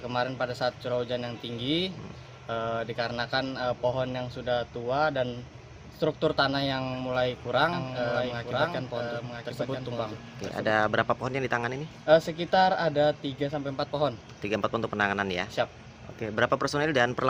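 From 7.73 s to 10.71 s there's a doubled audio track: a second, full-band copy of the same sound sits about a second behind the original and roughly 5 dB quieter. It has no reverb tail or room colour, just a clean duplicate, and it cuts in and out abruptly at both ends. The likely cause is the signal being picked up a second time through a slower path, or an edit leaving two copies out of step.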